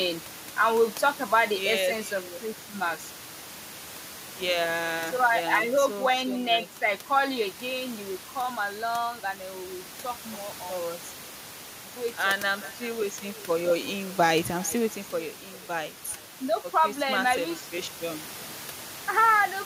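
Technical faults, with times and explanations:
Throughout, echo with no canceller: speech returns about 21 dB quieter roughly 400 ms later, as a far-end loudspeaker feeds its microphone; spectrograms show faint, thinner delayed copies trailing each phrase.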